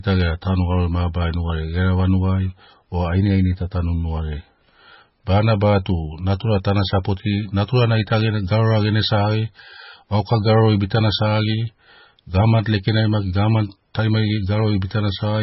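Throughout the speech, the sound is heavily damaged, likely by MP3 compression. Nothing is heard above 5.6 kHz, so the treble is cut off flat. Weak frequency detail flickers in and out, giving a watery, swirling texture. The damage points to a very low bitrate, near 18 kbps.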